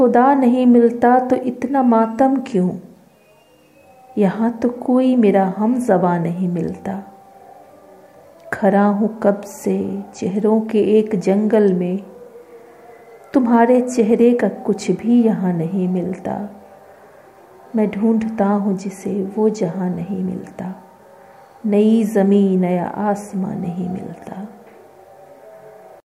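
No technical faults are audible.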